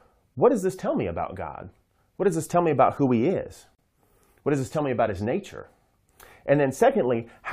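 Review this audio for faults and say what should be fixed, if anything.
There's a gap at a join of encoded pieces at 3.75 s, a break of about 37 ms in the speech. The two pieces were encoded separately and joined untrimmed, so encoder start delay and last-frame padding left a hole. To prevent it, trim delay and padding at every join, or encode as one continuous stream.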